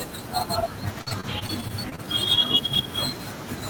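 From 1.01 to 2.12 s, the speech suffers repeated packet loss, producing a robotic sound. Audio data keeps failing to arrive in time, and each hole is patched by stretching out the sound that came just before it, about 205 ms of filler in all, roughly a fifth of that stretch. Another 120 ms is simply missing. The gaps are short, the longest about 53 ms, but they come in quick succession, so the speech turns choppy, with fragments dropping out.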